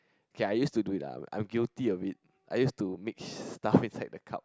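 Nothing in the speech stood out as a technical fault on listening.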